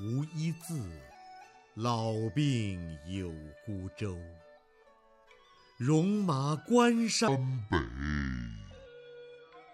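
From 7.28 s to 9.74 s there's a section at the wrong speed. It drops to 0.645 times normal, so the sound goes slow and deep, roughly seven semitones lower. The likely cause is that this stretch was played back against the wrong clock.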